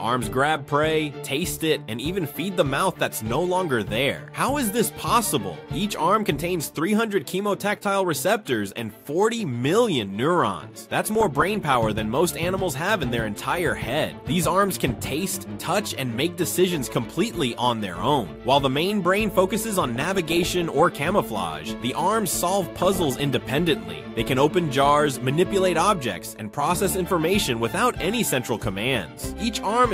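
Burbling noise breaks over the sound at 10.98–11.76 s, 14.66–15.65 s, 19.96–20.89 s and 22.78–23.21 s. This is DAB burbling. Weak reception let a small fraction of bit errors slip past error correction, corrupting MP2 audio data, so short blips of noise hit single sub-bands.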